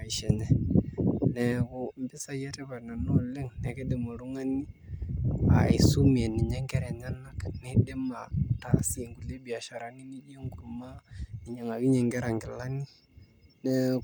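No technical faults are audible anywhere in the speech.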